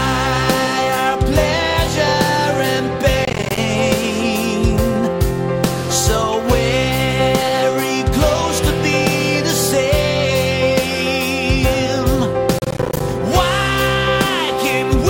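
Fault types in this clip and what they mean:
Processor overload crackle: the processing repeatedly misses its buffer deadlines, each miss leaving a silent hole of roughly 10 ms. The bursts at 3.25–3.58 s and 12.59–13.00 s sound like gritty tearing, unlike a single clean dropout or steady distortion.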